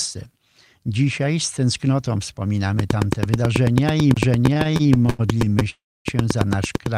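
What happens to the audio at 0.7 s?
Nothing goes wrong at 0.7 s; the speech carries on intact through that moment with no audible fault.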